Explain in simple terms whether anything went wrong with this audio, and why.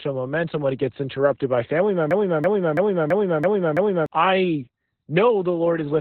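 Two things went wrong. The whole recording has Opus voice compression at a very low setting. The codec kept only the narrow telephone-like band, with nothing above about 4.3 kHz, and coded the rest coarsely, so the speech sounds muffled, hoarse and slightly robotic.

From 2.11 to 4.06 s, right after "gets interrupted by family", there is a broken-record loop. A snippet about a third of a second long repeats six times back to back. The likely cause is a stalled player or stream resending its last fragment, so whatever should have played then is lost.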